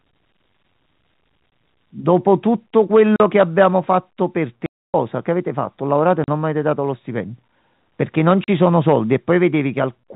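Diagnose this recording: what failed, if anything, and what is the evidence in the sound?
Packet loss filled with silence on the network leg: hard-edged dropouts at 1.50–1.52, 3.16–3.20, 4.66–4.94, 6.24–6.28 and 8.44–8.48 s. Holes of 20, 40 and 280 ms fit 20 ms packets, with the receiver inserting silence for every missing one.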